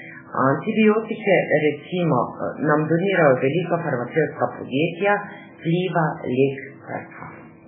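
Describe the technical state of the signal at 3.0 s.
At 3.0 s the speech carries damage present across the whole clip, with a hard ceiling at 3.7 kHz and nothing above it. The lower band sounds watery and swirling, and consonant onsets smear. This is likely MP3 compression, starved enough to fit a bitrate near 8 kbps: the encoder discards all treble above its cut-off and zeroes quieter frequency lines, which then flicker in and out between frames, producing the heavy, unstable texture.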